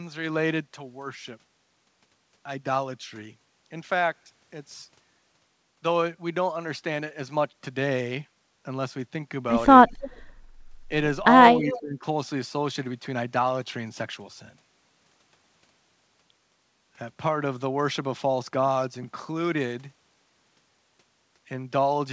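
Speech carried over a call link, band-limited with nothing above 8 kHz, which points to a wideband codec such as G.722. From 9.88 to 10.20 s and again from 11.71 to 11.81 s there is echo leak: a faint delayed copy of the talker returns about 0.32 s behind the original, some 20 dB below it, likely from a loudspeaker whose echo canceller let part of the pickup through. On a spectrogram it shows as a weak repeat of the preceding harmonic pattern shifted right by that delay. Between 11.56 and 12.04 s the speech is suppressed in double talk. For roughly half a second the level dips by as much as about 20 dB, likely because the canceller could not separate the near talker from the returning echo and ducked both. The waveform envelope visibly caves in there, and the spectrogram thins out.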